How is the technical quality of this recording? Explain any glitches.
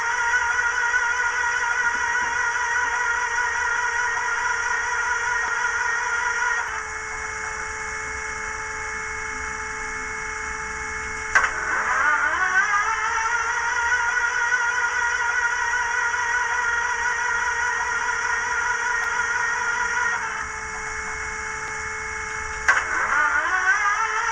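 The recording has two kinds of glitch: six sudden skips and two short stutters.

Dropped buffer (overrun), at 5.48, 6.68, 17.12, 19.04, 21.68 and 23.12 s. Each is a jump where the sound skips forward with no gap of silence. The likely cause is that the capture software fell behind and the hardware overwrote samples before they were read, so both sides of the lost stretch are joined directly. The skips cut out roughly 40 ms at 17.12 s, about 70 ms at the first two, and around a tenth of a second at the last three.

Repeated frames, from 11.58 to 11.67 s and from 16.71 to 16.80 s. In each place a block of about 46.4 ms plays two extra times, which fits a pair of compressed frames making up that block being written more than once. The decoder reproduces the same slice of sound, so you hear a brief stutter. Each stutter adds about 93 ms to the running time.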